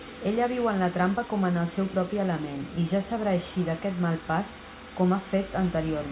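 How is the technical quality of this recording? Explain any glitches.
The technical quality of the recording is good, with no glitches to explain.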